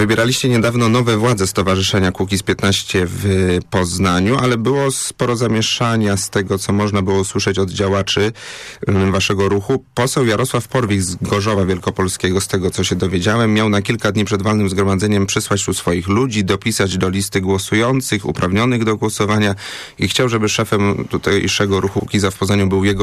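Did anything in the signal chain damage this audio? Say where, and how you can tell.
Yes: hard clipping throughout, from a stage driven about 2 dB past its limit, likely the converter. Around one percent of samples flatten, so only peaks crackle. The sharp, bright edge on loud moments, with quieter passages clean, separates it from smooth analogue saturation.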